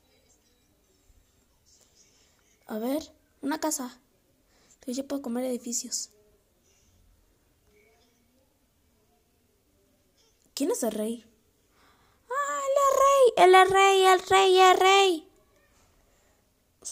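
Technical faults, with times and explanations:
Nothing in the audio stands out as a technical fault; it all sounds just as it should.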